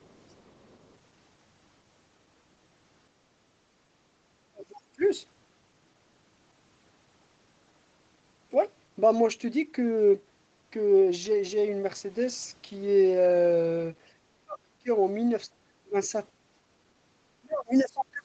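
From 0.00 to 0.96 s, other side's voice leaking through, likely residual echo, sits faintly about 35 dB under the speech, a thin extra band of harmonics on the spectrogram. Speech suppressed in double talk, likely the echo canceller ducking, follows at 4.49–5.02, 14.33–14.88, 15.47–16.12 and 17.40–18.24 s. The waveform collapses by about 30–35 dB, with a brief louder leak at 17.76–17.80 s.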